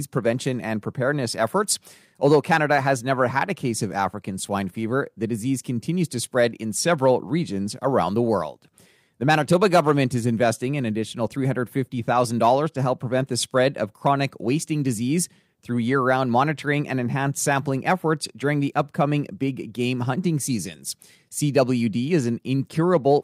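No technical faults turn up at any point in the speech. Nothing in the signal calls for a time stamp or an explanation.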